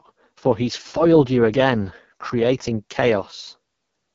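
Throughout the recording the speech has passed through the AMR wideband (HD Voice) codec at its lowest setting, which fits the 6.6 kbit/s mode. At that rate the pulse-driven vocal tract model has too few bits to follow the voice accurately, so the coding damage is heavy. The speech sounds rough and raspy from start to finish, and it stops sharply with nothing above 7.5 kHz, while the band from 6.4 to 7 kHz is only shaped noise.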